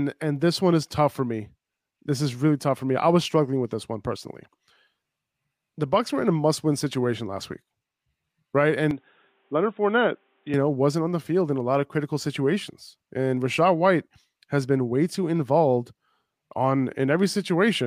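It's a speech clip, and from 8.91 to 10.54 s the sound goes dull and boxy, with nothing above 3.8 kHz, a level drop of around 5 dB and a faint new noise floor, switching right before "know wasn't on the". That's likely the input switched to a poorer device.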